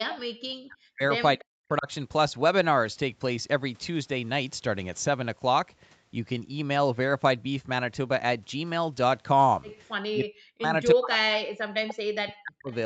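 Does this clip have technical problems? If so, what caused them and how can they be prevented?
Yes. The speech drops away four times: from 0.01 to 1.02 s, 1.38 to 1.88 s, 10.14 to 10.74 s and 10.94 to 12.72 s, with the level falling by as much as around 40 dB and parts of those stretches dipping or cutting out. This is likely speech suppressed in double talk. While the far side's sound played on the loudspeaker, the echo canceller could not tell this talker apart from the loudspeaker echo, so it turned both down. Using a headset, or an echo canceller with better double-talk detection, prevents it.

At 1.39 to 1.44 s a short scrap of a delayed voice comes back, around 25 dB below the speech and arriving 310 ms late. This is likely an echo leak. The loudspeaker side's echo canceller did not remove all of what its microphone picked up from the speaker, and that remainder was sent back down the call. 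A headset, lower loudspeaker volume, or better acoustic separation between loudspeaker and microphone prevents it.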